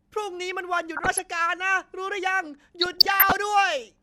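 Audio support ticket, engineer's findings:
DAB burbling, 0.96–1.19 s and 2.81–3.36 s: short noise blips over speech. Residual bit errors (a fraction of a percent) corrupt MP2 audio data. Single bands blip, unlike a full-band dropout or mute.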